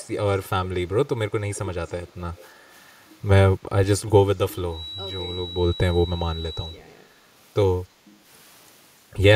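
Speech recording with two faults. Faint delayed copies at 0.02–0.08, 1.53–1.59, 1.87–2.13 and 2.35–2.48 s trail the speech by 295 ms, well below it. This is likely echo leak from a loudspeaker the canceller missed. The background is gated by the echo canceller: room sound dips about 5 dB at 2.55–2.68 s and about 10 dB at 4.76–4.96 s.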